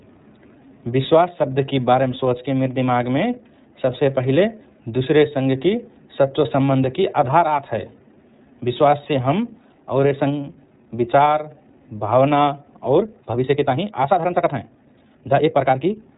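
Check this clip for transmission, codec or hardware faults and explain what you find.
One transmission fault runs through the whole clip: iLBC codec coding. Its narrowband VoIP coding caps the spectrum at 3.8 kHz. Each block of the speech is coded without relying on the previous one, and the speech has a plainly audible rough, synthetic grain. The sound fits the 13.33 kbps mode with 30 ms frames. On a spectrogram, energy stops at a flat ceiling near 3.8 kHz.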